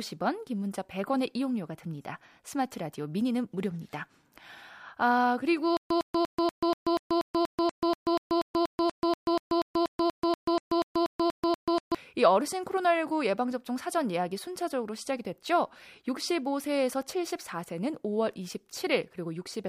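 Stutter with silent gaps runs from 5.77 s to 11.95 s of the speech. A burst of 106 ms plays, then 135 ms of digital silence follows, and the same burst returns every 241 ms, 25 times in all. The likely cause is a player or stream that stalled and, on each retry, replayed its last fragment before running empty. The speech that belonged to that stretch is lost.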